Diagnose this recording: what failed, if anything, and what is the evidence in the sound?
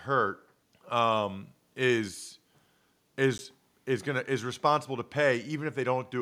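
Block of digital silence at 3.38 s: an 11.6 ms cut to silence, short enough to be heard as a tick or dip, which fits an unfilled 512-sample driver buffer.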